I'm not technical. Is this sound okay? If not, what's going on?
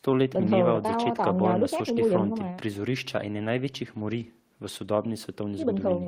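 Yes, this sound is okay, and nothing is going wrong with it.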